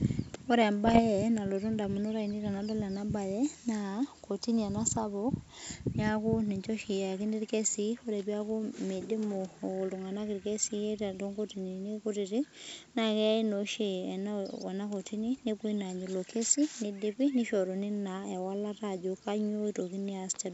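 From about 0.85 to 1.01 s the speech breaks into pops and a rough, gritty burst with brief jumps in level. These are bit errors on an ADPCM link, around half a percent of bits flipped across nine frames. Each flipped bit knocks the decoder's step size and predictor off track, so the damage rings on briefly before the G.722 wideband coding settles back.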